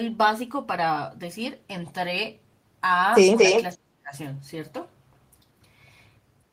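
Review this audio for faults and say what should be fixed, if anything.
From 3.35 to 3.64 s there is an echo leak: a second copy of the speech trails the original by 230 ms and is about as loud as the speech itself. A loudspeaker on the far end likely fed its output back into its microphone, and the echo canceller failed to remove it. A room reverb tail would smear continuously and decay. This is a distinct, equally loud repeat at a fixed delay. Better echo-canceller convergence and a lower speaker volume or a headset at the far end would prevent it.

From 3.74 to 4.14 s, about 0.4 s in all, the speech is suppressed in double talk. The level falls sharply, dropping by roughly 30 dB at its deepest, while the other side is talking. The canceller likely mistook the near talker for echo and attenuated both. A network dropout would cut to silence regardless of the other side. This dip is tied to the overlap and follows the echo episode. 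A double-talk detector that holds adaptation instead of clamping gain during overlap would prevent it.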